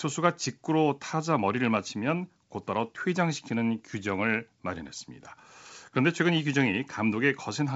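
Nothing in this speech clip stands out as a technical fault. It carries the bandwidth of G.722 wideband telephone coding at 64 kbit/s, with the sound reaching up to about 7.7 kHz and nothing above that.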